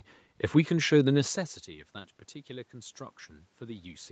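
No technical faults are audible.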